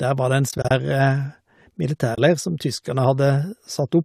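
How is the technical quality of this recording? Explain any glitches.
The recording has two dropouts, both from AAC frame loss with muting, heard as brief soft-edged holes in the speech. They sit over the light coding of what is likely low-delay AAC compression.

From 0.49 to 0.71 s, about 110 ms of audio is missing, scattered over roughly 220 ms in short gaps of up to about 30 ms. At 2.15 s a single 30 ms gap follows, ending at 2.18 s. Lost frames were decoded as silence, and the overlapping windows fade the sound out and back in. Gap lengths in 10 ms steps fit short low-delay frames. A spectrogram would show narrow full-band vertical blanks, and the waveform would show tapered dips toward silence.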